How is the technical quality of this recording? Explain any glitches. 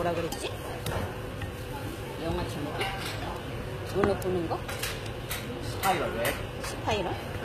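Technical quality is poor: the recording carries audible low-bitrate codec damage throughout and a steady train of clicks across almost its whole length.

HE-AAC compression likely explains the damage heard from start to finish. The treble above the coded band is synthesized by copying lower bands upward, so it sounds bright but gritty and metallic, with harmonics that do not line up. The spectrum stops at 14.9 kHz, and the degree of damage fits a bitrate near 20 kbps.

Word clock ticks run from 0.27 s to 7.32 s, recurring roughly every 0.15 s, about 40 in all. The receiving device is free-running rather than locked to the sender's clock, which points to a mismatch of around 100 ppm. Each time the two clocks slip by one sample, a sample is dropped or repeated, producing a sharp single-sample tick at a regular rate and uneven strength.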